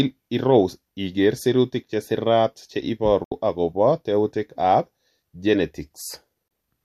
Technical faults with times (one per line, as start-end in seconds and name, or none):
3.24-3.32 digital broadcast dropout
6.48-6.51 digital broadcast dropout